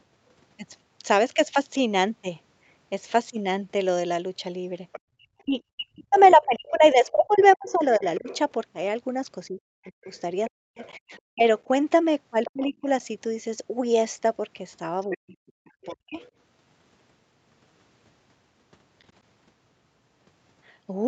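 From 4.92 to 8.38 s, the other side's voice leaks through. It sits well below the talker, about 20 dB down. The likely cause is loudspeaker echo the canceller failed to remove.

From 5.15 to 12.88 s, the talker's speech is suppressed in double talk. Both sides overlap, and the canceller likely turns everything down. Level drops by as much as about 40 dB, in pieces totalling around three seconds.

Inside that stretch, from 10.05 to 12.51 s, the leaking voice returns at a similar level. It comes back again, fainter, from 15.02 to 15.94 s. From 15.16 to 16.19 s the talker is again pushed down for about 0.7 s.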